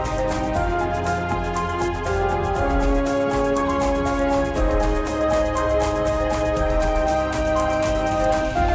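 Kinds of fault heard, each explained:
No technical faults can be heard anywhere in the signal.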